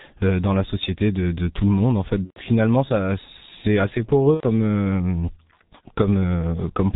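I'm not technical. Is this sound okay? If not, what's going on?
No. The whole clip has passed through the G.723.1 codec, an old internet-phone system that squeezes speech down very hard. It throws away everything above 4 kHz, so the voice sounds muffled and dull. It also tracks the voice in coarse steps, so the voice comes out rough and hoarse, and consonants lose their edges.

There are also two short dropouts caused by VoIP packet loss concealed by the speech codec. Pieces of the signal went missing on the way, and the codec guessed what should fill the gap by stretching the last bit of voice. The first is from 2.24 to 2.40 s, just after "le monde en fait", covering about 120 ms. The second is from 4.34 to 4.46 s, just after "finalement c'est assez", covering about 90 ms. At each point the voice turns into a brief stretched, fading smear and stays weak for a moment afterwards.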